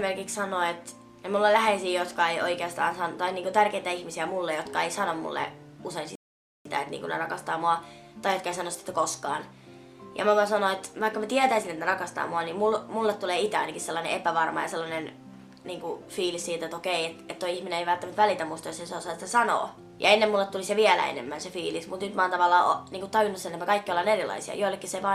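At 6.15 s a rebuffering stall halts playback: the player runs out of downloaded audio and waits for more. The sound drops to silence for about half a second, then resumes exactly where it stopped, so nothing is missing but time is added. On a waveform this shows as a flat gap from 6.15 to 6.65 s, and on a spectrogram as a blank vertical band.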